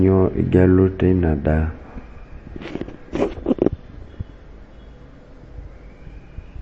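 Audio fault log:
throughout, MP3 compression: the speech has no content above about 8.3 kHz, a hard treble ceiling, and the codec damage is plainly audible as a watery, swirly texture. This is likely heavy MP3 encoding, and the damage fits a low bitrate around 32 kbps. With so few bits, the encoder cuts everything above a fixed frequency and drops weak spectral lines that flicker on and off between frames, and that flicker produces the unstable, smeared quality.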